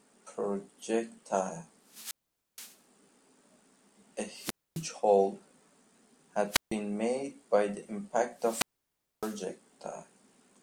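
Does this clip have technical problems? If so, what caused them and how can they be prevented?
Yes: four wireless microphone squelch dropouts, at 1.85–2.82 s, 4.34–4.90 s, 6.48–6.75 s and 8.35–9.43 s. In each, the FM link fades, hiss rises, the receiver's squelch mutes the speech for about 0.47, 0.26, 0.15 and 0.61 s, then it returns. Better antenna placement and line of sight would prevent it.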